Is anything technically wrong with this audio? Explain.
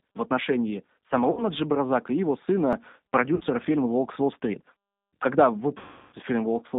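Yes, there are three kinds of fault in this speech clip.

G.729 codec, throughout: the speech is band-limited to roughly 200 Hz to 3.7 kHz, which fits an 8 kbit/s G.729 stream. The codec doesn't send the waveform. It rebuilds each 10 ms frame from a vocal tract filter, a pitch predictor and a few pulses, so the damage is plainly audible: a rough, slightly synthetic texture with no air or brightness above the telephone band.

VoIP packet loss concealed by the speech codec, at 1.31 to 1.45 s just after "в отношении", at 3.34 to 3.43 s, and at 5.78 to 6.15 s. The first two gaps cover about 60 ms each and the last about 340 ms. In each gap the decoder kept repeating its last pitch and filter at falling gain. That stretches the sound into a buzzy tone or coloured noise that fades. The final gap is the longest, and the sound stays weak briefly after each one.

Dropped buffer (overrun), at 2.73 s just after "и его": there is a small forward jump in the sound and no silence. 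A chunk of roughly 20 ms seems to be missing, and the two sides are butted together. The likely cause is that the recording software didn't collect a buffer before the hardware overwrote it.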